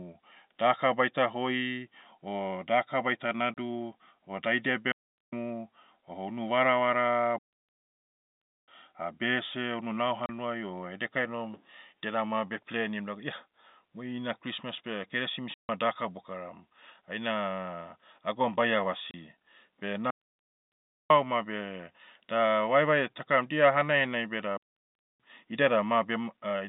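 Packet loss filled with silence cuts 30 ms holes at 3.54–3.57 s, 10.26–10.29 s and 19.11–19.14 s. A longer 150 ms gap at 15.54–15.69 s falls between "mui ina christmas beh" and "daka bokaram". The hard-edged holes fit lost 30 ms packets replaced by silence. Digital wireless dropouts mute the telephone-band audio cleanly, with a very short fade and no noise burst, at 4.92–5.33 s (410 ms), at 7.38–8.68 s (1.3 s) after "o unu varavara", at 20.10–21.10 s (1.0 s) before "beh da", and at 24.57–25.20 s (627 ms).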